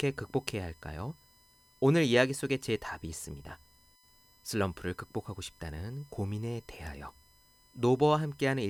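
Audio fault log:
throughout USB whine: a steady, fixed-pitch whine sits under the speech, built on a 1 kHz tone with a row of harmonics, the strongest at 5 kHz, roughly 35 dB below the speech. It comes from the USB bus drawing current in 1 ms frames. That pulsing load leaks into the audio through shared power or ground, so the 1 kHz frame rate and its multiples become an audible tone that never changes pitch.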